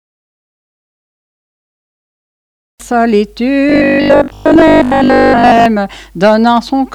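From 3.70 to 5.66 s, new audio likely stopped arriving often enough, so playback kept repeating one short buffer, around 20 ms, in place of most of the real signal. This gives robotic sound from repeated short buffers: a rigid, metallic 50 Hz buzz that only loosely tracks the sound.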